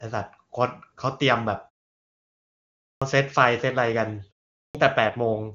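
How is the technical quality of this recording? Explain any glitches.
Two kinds of glitch are audible in this speech recording: clipped word onsets after pauses, and a brief codec rate drop near the end.

Clipped start after a pause at 2.97 s and 4.70 s: the output device drops into a low-power state during silence and needs time to wake. About 45 ms is lost after the 1.35 s pause and about 47 ms after the 0.46 s pause, so speech bursts in abruptly without its first sounds.

AMR rate drop from 5.05 to 5.54 s: the wideband speech turns rougher and more synthetic, with the same bandwidth and no gap. This fits the network pushing the AMR-WB codec from 23.85 kbit/s down to 8.85 kbit/s on a weak radio link, spending bits on error protection rather than on the voice.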